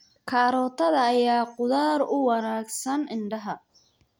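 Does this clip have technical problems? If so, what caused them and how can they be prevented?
No, the speech signal shows no technical faults and needs no preventive measures.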